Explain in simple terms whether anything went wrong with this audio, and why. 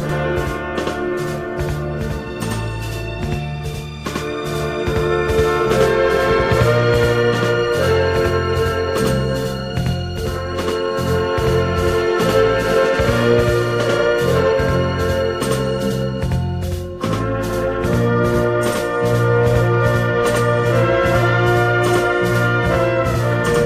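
Every sound in the clip is followed by a second copy about 93 ms later: channel delay (doubling). One channel ran late, which fits a 4096-sample buffer, and both were mixed together.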